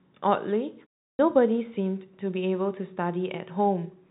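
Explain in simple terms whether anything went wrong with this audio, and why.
One thing went wrong: a clipped start after a pause. After a short silence of 0.34 s, the speech resumes at 1.12 s with its first 71 ms missing, so it begins abruptly. The playback device likely dozed off during the quiet and woke too late.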